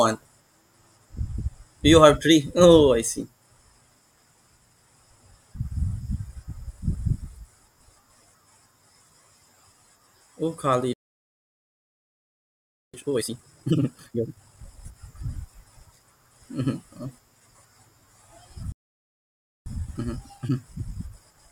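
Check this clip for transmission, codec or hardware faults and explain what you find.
Two playback stalls occur in this speech clip, and after each one the audio rushes forward with time-compressed catch-up.

Playback stall: output cuts to silence from 10.93 to 12.94 s (2.0 s) and from 18.72 to 19.66 s (about 0.94 s). The likely cause is the player running out of buffered data or its output thread being blocked. Speech halts mid-flow and then resumes.

Time-compressed catch-up: from 12.94 to 14.94 s the speech runs at 2.0× speed, and from 19.66 s to the end at 1.1×. The player drains its backlog by cutting out and cross-fading short segments, so the speech sounds hurried at normal pitch.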